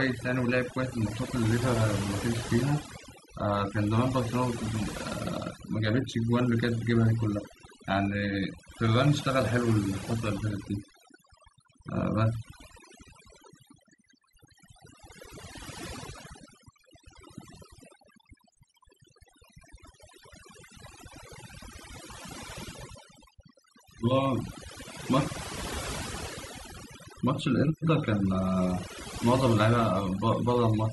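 Throughout the speech, overdone noise removal strips away the background, leaving near silence dotted with twinkling specks. Unlike a noise gate, which cuts everything at once, this removes individual frequency bands, so quiet parts of the voice vanish piecemeal.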